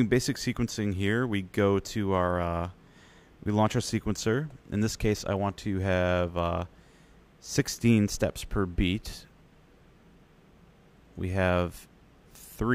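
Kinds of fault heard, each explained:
No audible faults turn up anywhere in this recording.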